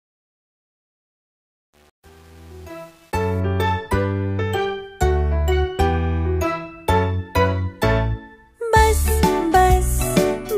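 From the start to about 3.40 s, the fade-in sounds gritty, worst until about 3.21 s. This is truncation distortion on a fade: the gain stage keeps too few bits without dither, which points to 8 bits, so quiet passages collapse into coarse square steps.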